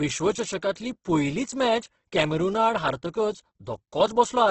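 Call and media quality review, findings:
Grainy, rough speech throughout, nothing above 8.2 kHz; spectrogram shows a hard ceiling and noise-filled bands. Likely Opus compression in CELT mode at a starved bitrate, fitting roughly 12 kbps.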